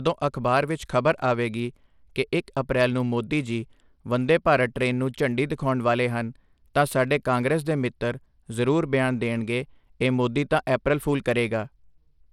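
Bluetooth SBC compression runs throughout the speech, and it is the likely cause of the damage heard from start to finish. The sub-band coder seems starved of bits, with a low bit pool that fits something near 96 kbps. It gives the upper bands little or nothing and quantises the rest coarsely. Nothing sounds above 17.3 kHz, the treble flickers in and out, and a plainly audible grainy roughness with aliasing hangs over the sound.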